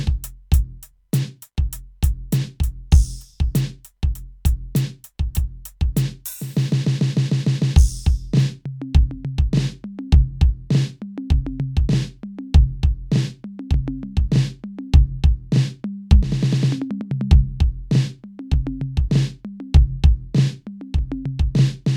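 At 14.95 s the music hits a single moment of hard clipping. A peak momentarily exceeds what the signal path can carry, overdriving it by about 1 dB, so the top of the waveform is sheared off flat instead of following its natural curve. That flattened tip generates a brief burst of high harmonics. Because the overload is slight and over in about a millisecond, it comes across as one small, sharp tick rather than sustained fuzz.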